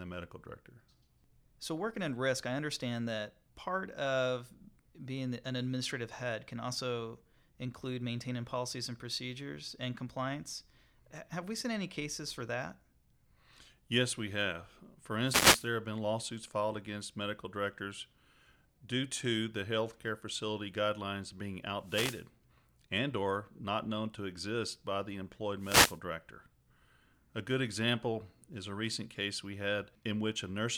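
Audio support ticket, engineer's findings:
Wireless microphone noise hits at 15.23–15.69 s, 21.82–22.27 s and 25.59–26.00 s, each about 0.4–0.5 s of swishing static over the speech. Analogue FM radio link fading as reflected paths cancel, so receiver noise rises and breaks through.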